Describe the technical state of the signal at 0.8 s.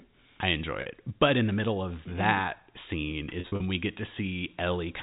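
Packet loss with pitch repetition spans 0.82 to 0.86 s. The last pitch period repeats across the 40 ms gap, giving a held, buzzy sound.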